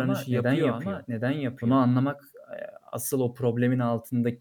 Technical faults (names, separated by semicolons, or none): doubled audio track